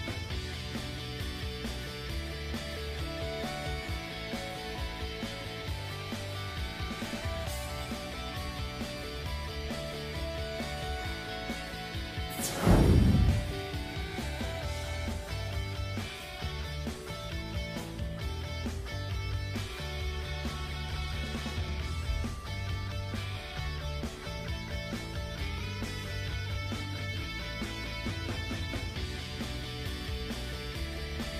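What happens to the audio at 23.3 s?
Sample clock jitter is present at 23.3 s, as it is across the whole clip. The converter's clock wanders by a few microseconds, so each sample is captured slightly early or late at random. Because the resulting error scales with how steeply the waveform is changing, it sits roughly 30 dB below the signal and tracks it. At this moment that comes across as a hiss or grain that thickens on loud, bright passages and disappears whenever the sound falls silent.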